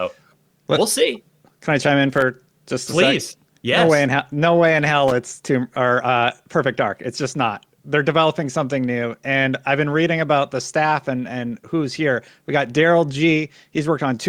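At 2.14 to 2.22 s, between "I chime in" and "just please", and again at 5.08 to 5.12 s after "way in", loose connector crackle breaks through: an intermittent contact chops the speech into irregular scratchy bursts, seen as ragged broadband vertical streaks on a spectrogram and spiky, gapped waveform segments.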